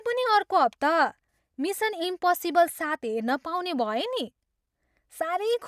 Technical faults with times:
none

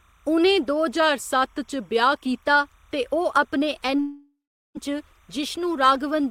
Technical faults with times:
0.00-6.31 timecode bleed
0.88-2.42 drift correction step
3.96-4.00 short concealed packet loss
4.00-4.77 long network dropout

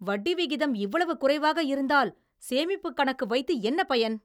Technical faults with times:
none

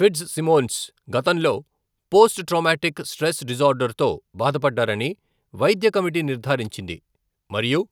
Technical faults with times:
none

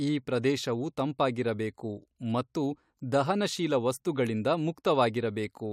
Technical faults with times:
none

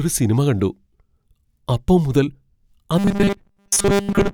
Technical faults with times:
2.98-4.33 robotic sound from repeated short buffers

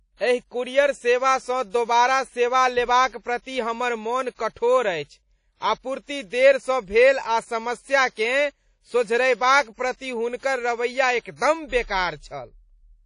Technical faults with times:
0.00-13.05 WMA compression
3.08-3.12 pre-echo
11.36-11.41 pre-echo

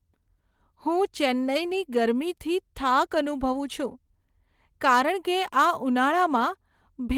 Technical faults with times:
none

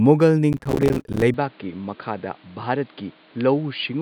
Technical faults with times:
0.53-1.22 processor overload crackle
1.34-4.02 input switched to a poorer device

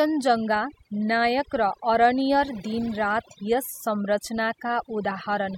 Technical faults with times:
0.00-5.57 overdone noise removal

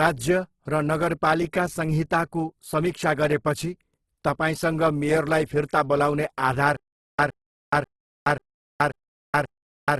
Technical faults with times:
0.00-9.99 Opus compression
6.76-9.99 stutter with silent gaps

